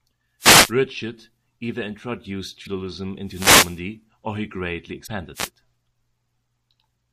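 A speech recording hit by two kinds of transmission fault. Wireless microphone noise hits occur at 0.39 to 0.73 s, 3.25 to 3.80 s (just before "or he greatly") and 5.34 to 5.50 s. These are swishes of static as the radio signal fades and receiver noise rises over the voice. On a spectrogram they show as broadband hiss smearing across the harmonics. Damaged data in a compressed stream produces short glitches at 2.63 to 2.67 s, after "either introduced", and 5.03 to 5.08 s, after "or he greatly", where the decoder misreads frames and resyncs. Each appears as a brief vertical smear or discontinuity in the waveform.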